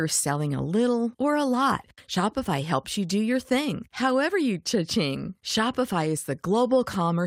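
Nothing here calls for comment, as the speech comes through without any technical trouble worth pointing out.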